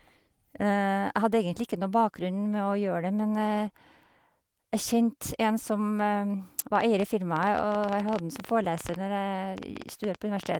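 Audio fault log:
6.76 to 10.56 s, train of clicks: about ten ticks a second at an uneven pace, roughly forty in all, popping up around 10 dB above the speech and audible in the pauses too. Likely interference or a faulty connection injecting pulses.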